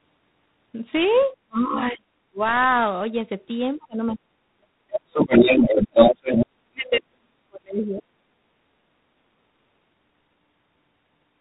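Throughout, the audio is coded with G.726 ADPCM at 24 kbit/s. Only three bits per sample describe the error of an adaptive prediction. The result is a harsh, rasping hiss that swells and fades with the speech, and nothing above 4 kHz comes through.

From 1.17 to 1.26 s, the other side's voice leaks through faintly, far below the talker. The likely cause is loudspeaker sound that the echo canceller left in the microphone signal.

Next comes speech suppressed in double talk. The canceller, likely unable to separate its own talker from the echo while both spoke, pulled the level down. The talker drops sharply from 1.34 to 2.08 s and again from 2.30 to 2.44 s. The longest stretch runs from 3.77 to 8.07 s, with roughly 3 s of cuts that go about 40 dB deep at worst.

Inside that stretch, the leak returns. At 4.92 to 4.98 s the second voice is near the talker's level, and from 5.14 to 6.46 s it is louder than the talker.

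Brief suppression dips follow at 8.23 to 8.33 s and 9.41 to 9.51 s.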